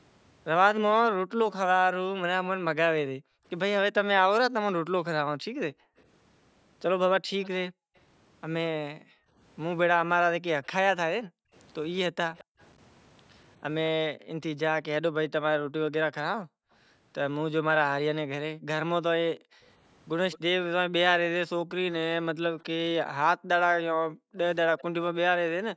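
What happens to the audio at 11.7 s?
At 11.7 s a faint delayed copy of the speech trails the original by about 211 ms, sitting about 25 dB below it, from 10.65 to 12.64 s. This is an echo leak, likely from a far-end loudspeaker whose echo canceller let some of its microphone pickup return down the line. Unlike gating, it adds a repeated sound rather than removing one.

The same moment falls within the stretch from 1.35 to 19.61 s where the background is gated by the echo canceller. While the loudspeaker plays, the canceller pulls the microphone down hard, so the room sound dips by as much as about 40 dB in drops totalling roughly two seconds. It takes ambience away instead of adding a delayed copy.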